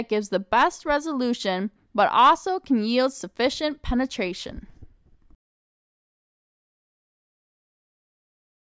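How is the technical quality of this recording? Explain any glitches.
No glitches can be heard anywhere in the recording. There is nothing technical here that calls for explanation.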